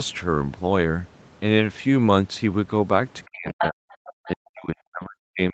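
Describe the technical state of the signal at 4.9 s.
At 4.9 s the speech is attenuated, sitting inside a suppression span that runs from 4.26 s to the end of the clip. At its deepest the level falls by about 40 dB. The likely cause is speech suppressed in double talk: with both sides active, the echo canceller could not tell the near talker from loudspeaker echo and pulled the whole signal down. The band stays limited to 8 kHz, which fits a wideband call codec.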